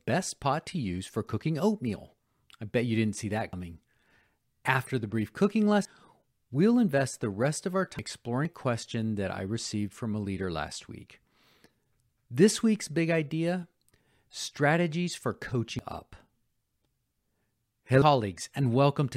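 The speech jumps ahead at 3.53, 5.85, 7.99, 8.45, 15.79 and 18.02 s, each losing a tenth to a third of a second. That's likely a dropped buffer (overrun).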